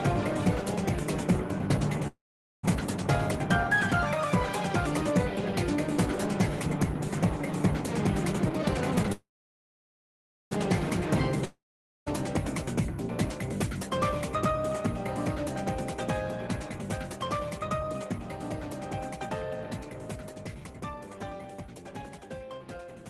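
At 2.07 s packets were likely held up and the jitter buffer ran dry, causing a call audio freeze. The last sound stretches into a fading buzz, then about 0.46 s of silence. The audio resumes at 2.65 s exactly where it stopped, with nothing lost, just 0.56 s later.

From 8.33 to 9.10 s the buffer held more than it aims for, so it repeatedly trimmed pitch-period slices in a jitter buffer speed-up. The sound runs at 150% speed with unchanged pitch, and about 0.4 s is cut away.

Straight after, at 9.12 s, a second call audio freeze, likely from another delivery stall, draws the sound out into a fade and about 1.26 s of silence before it picks up unchanged at 10.53 s.

At 11.45 s a long network dropout likely stopped packets arriving altogether. A brief fading buzz gives way to about half a second of silence, and when sound returns at 12.08 s, 0.62 s of it is simply gone.

From 16.67 to 23.03 s a gentler jitter buffer speed-up runs the sound at 107%, shaving off about half a second so it feels slightly hurried.

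Throughout, the Opus call coding adds its usual coding noise and caps the top end at 12 kHz.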